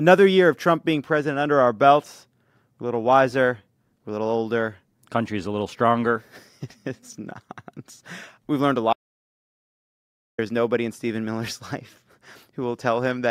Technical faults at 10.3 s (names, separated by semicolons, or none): audio dropout to silence